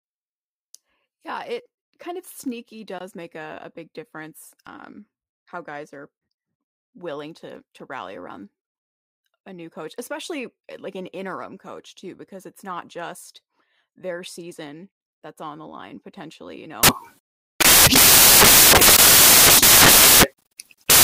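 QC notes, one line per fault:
16.83–21.03 s, samples built from the wrong bytes: from here to the end the speech dissolves into loud, harsh broadband noise, because each sample is assembled from misaligned or swapped bytes, pushing the rapidly changing low-order bits into the most significant positions.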